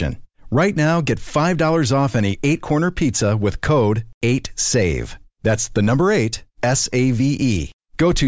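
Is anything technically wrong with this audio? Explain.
No, nothing technically wrong turns up here; the speech just runs along without any glitches or faults worth flagging.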